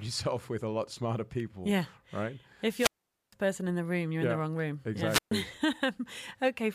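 Two wireless microphone squelch dropouts turn up in this speech. From 2.70 to 3.32 s the radio link fades, a short burst of hiss comes up, then the receiver's squelch kicks in and mutes the output for about 0.46 s before the signal comes back just ahead of "person in the room". The second, from 5.06 to 5.31 s right after "in the wrong room", is shorter, with a mute of around 0.13 s.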